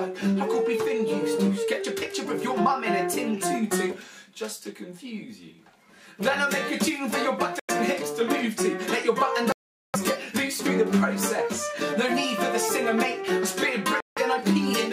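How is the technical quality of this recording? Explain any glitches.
The recording has three audible gaps: at 7.60–7.71 s, at 9.52–9.96 s (the longest, about 0.4 s), and at 14.00–14.19 s. They sound like a Bluetooth dropout, likely from wireless packets arriving too late to play. Each gap cuts abruptly to silence, then the audio resumes further along, as if it had kept playing. The waveform shows flat-line holes, and the spectrogram shows sharp-edged blank columns.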